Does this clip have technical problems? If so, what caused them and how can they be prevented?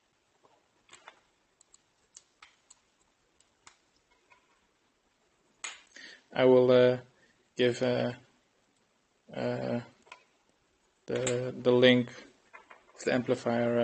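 No, there's nothing here that needs fixing, since the audio just sounds like an ordinary trip through a call connection doing its normal job, so there's nothing to prevent either.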